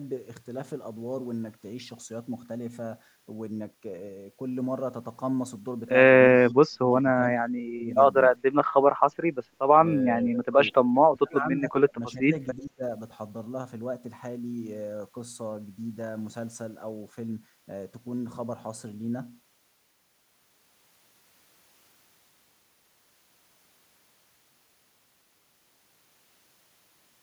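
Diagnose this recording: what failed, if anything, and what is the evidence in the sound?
The speech gets pushed down in short bursts: 6.48–6.85 s, 7.18–7.92 s, 10.21–11.7 s, 11.9–12.32 s and 12.57–12.83 s, dipping by up to around 25 to 30 dB. That pattern is likely speech suppressed in double talk, in the call-processing stage. When the far end talked over this side, the echo canceller couldn't tell the local talker from its own loudspeaker echo and clamped the whole lot.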